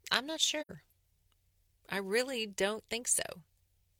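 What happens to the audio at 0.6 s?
Right after "I'm not", AAC frame loss with muting opens a soft-edged gap from 0.61 to 0.71 s. Zeroed frames fade out and back in, consistent with two lost frames.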